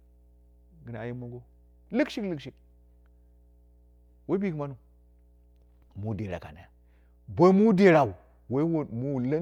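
A steady mains hum sits under the speech from start to finish, a 60 Hz tone well below the speech level, coupled in from the power line. Its fixed pitch and low harmonics distinguish it from broadband hiss or irregular low-frequency rumble.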